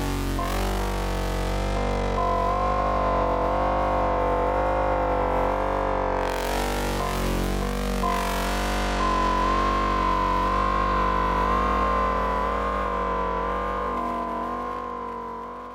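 The clip is a recording of sounds, and nothing is technically wrong with it.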